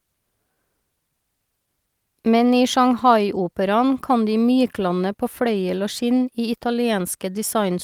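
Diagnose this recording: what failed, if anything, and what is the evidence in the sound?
The failure sits in the network and jitter-buffer stage. There's clock drift between sender and receiver through the whole speech clip, with the sender's clock running about 2 percent slower than the receiver's. Because fresh audio arrives a little slower than it's played out, the jitter buffer keeps drifting toward empty. The receiver has to keep stretching what it has to avoid running dry, so the timing never quite settles.

You can hear that compensation as repeated timing corrections from 0.04 s to 6.75 s. The receiver keeps repeating short slivers of audio, always in the same direction, at uneven spacing. The net effect is playback at 98 percent speed, with somewhere around 150 ms added over that stretch. Each edit is tiny, so what comes through is a faintly unsteady tempo and the odd small hiccup.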